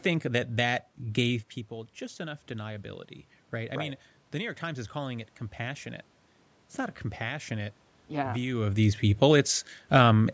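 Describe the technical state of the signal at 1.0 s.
At 1.0 s the speech signal is intact, with only the normal low-cut of the call's microphone processing and the room's background noise present.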